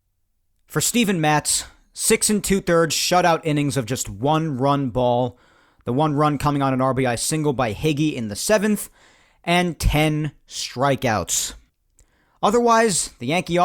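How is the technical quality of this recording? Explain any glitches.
The technical quality of this recording is sound, with no glitches to explain.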